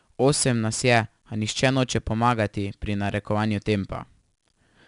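4-bit ADPCM compression runs throughout the speech, leaving gritty, level-tracking hiss on louder passages and nothing above about 10.6 kHz, which points to a reduced sample rate.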